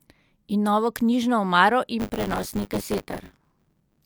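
From 1.99 s to the end of the speech, buffer tearing sets in: a steady robotic rattle at 100 Hz rides on the sound. The writer and the reading hardware have drifted so they cross inside each period, leaving roughly a third of every buffer filled with audio about 20 ms stale, hard-joined at both edges. Unlike underrun dropouts, there are no gaps or silences, and the buzz vanishes in pauses, tracking only the signal.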